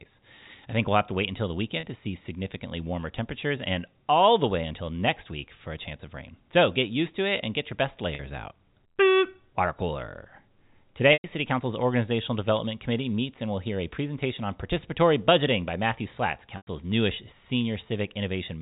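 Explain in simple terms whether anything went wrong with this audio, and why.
There are four short gaps from packet loss with pitch repetition. At 1.8 s, after "to wait until the", and at 8.15 s, after "and get your best", 30 to 40 ms went missing. The sound briefly holds a buzzy tone. At 11.13 s and 16.57 s, about 100 ms dropped out. The repeated sound fades toward silence before speech returns.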